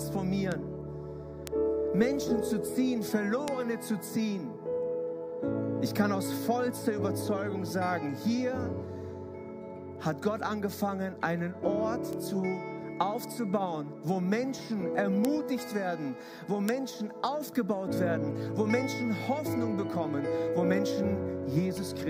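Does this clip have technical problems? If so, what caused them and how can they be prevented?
Yes. Bit error spikes: isolated sharp ticks at 0.52, 1.47, 2.22, 3.48, 12.13, 15.25 and 16.69 s, peaking at about -20 to -8 dBFS. They are broadband and unrelated to the audio. Each tick is a flipped bit briefly throwing one to three samples off by a power of two, unlike a dropout, which leaves a gap. Prevention: use error-checked memory and links with checksums, and check cabling and clocking on the digital path.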